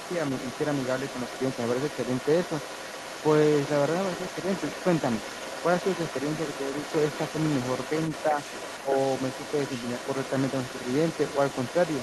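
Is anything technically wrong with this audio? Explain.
Yes, there are two problems.

Other side's voice leaking through, from 0 s to the end: a second voice sits under the speech throughout, roughly 10 dB below it. This is likely loudspeaker sound picked up by the microphone that the echo canceller failed to remove.

Speech suppressed in double talk, at 8.31 to 8.37 s and 8.79 to 8.96 s: the voice dips briefly, by only a few decibels the first time and by about 15 dB the second. This is likely the echo canceller ducking both sides while they overlapped.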